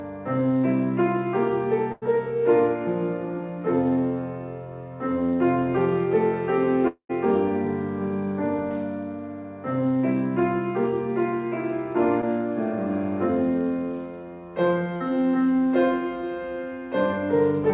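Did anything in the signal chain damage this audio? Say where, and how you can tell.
Yes, all of it at the network stage.

At 1.92 to 2.04 s the sound freezes into a held, fading continuation for about 95 ms, then jumps ahead. This is a burst of packet loss: roughly 100 ms of packets never arrived, and the receiver stretched the last sound before resuming past the gap.

From 6.88 to 7.11 s the sound smears on for about 216 ms, dies into roughly 90 ms of silence, then returns with about 220 ms gone. The likely cause is a long network dropout, where concealment ran out before packets resumed.

Brief smears at 12.21 to 12.24 s and 14.96 to 15.02 s are short concealed packet loss. The first covers about 20 ms of missing audio with an 11 ms fill, and the second covers 40 ms. Each hole is patched by extending the preceding sound, then blended back into the real signal. The band limit at 4 kHz comes from the call path and points to G.711 A-law at 64 kbps.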